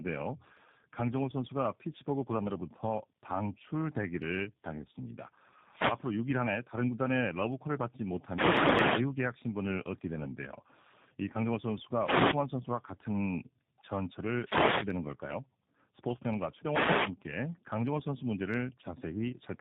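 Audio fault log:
Throughout, tandem speech coding: speech recoded through CVSD, AMR-NB and G.729A in turn, each compounding prior errors; rough, muffled, warbly, spectrogram empty above 3.4 kHz, harmonics smeared.
8.23–9.12 s and 14.28–15.03 s, wireless microphone noise hit: radio signal fades, receiver noise swells into static swishes over speech; broadband vertical noise bands, waveform noise floor jumps.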